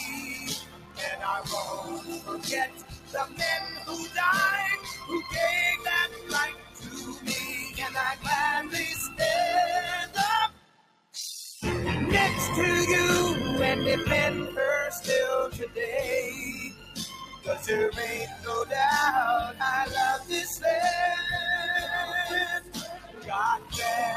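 The audio carries a steady buzz at 41.7 Hz and plays slower than it should, at 0.889 times its proper speed. Both point to a block size mismatch (padded): one stage writes shorter blocks than the next one reads, which fits 1024-sample written blocks, and the shortfall in each block is filled with silence. That inserts a brief gap every block, producing the buzz at the block rate and stretching the timeline by the ratio of the two sizes. A noise suppressor applied to music or sounds is also active throughout. A speech-oriented suppressor treats sustained material, ambience and decays as noise and pulls them down while onsets pass, so the level swings by around 15 dB between what it keeps and what it attenuates. In seven stretches the noise suppressor cuts the sound further, taking it well below the surrounding level: 0.1 to 4.16 s (about 14 dB at its deepest), 4.77 to 8.26 s (about 13 dB), 10.06 to 11.62 s (about 14 dB), 15.52 to 15.77 s (about 12 dB), 16.38 to 17.66 s (about 12 dB), 18.27 to 18.46 s (about 9 dB) and 22.6 to 23.74 s (about 12 dB). 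Within each stretch only part of the time is affected, from a fraction of a second in the shortest to roughly 3 s in the first, as held or fading portions get classified as noise.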